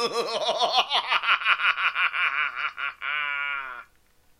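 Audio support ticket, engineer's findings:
Checked the whole sound clip and found nothing wrong, so no action needed on this ticket.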